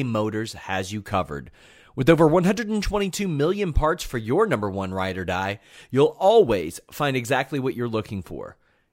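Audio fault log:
No faults detected in this speech recording.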